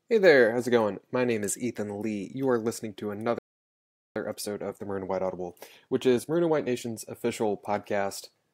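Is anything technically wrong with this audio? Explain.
Yes, there are two related faults. After "are listening to", a playback stall cuts the speech off from 3.39 to 4.16 s, a gap of about 0.77 s. The player was likely starved of data or had its output thread blocked, so nothing reached the output until it recovered. The sentence simply halts and then resumes. On a waveform this is a flat line mid-utterance, and a spectrogram shows a clean vertical band of empty time with no fade at either edge.

Time-compressed catch-up follows from 4.16 to 7.16 s. To work off the backlog left by the stall, the player removes short slices of audio and cross-fades across the joins, running at about 1.15 times normal speed. Pitch stays natural, but the speech sounds hurried. A spectrogram shows syllables and pauses packed more tightly than before 3.39 s, with harmonics unchanged in frequency and occasional small discontinuities at the splice points.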